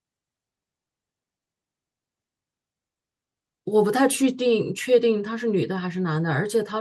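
Nothing technically wrong turns up in this bit of speech, so there's no fault to pin a time or a cause on.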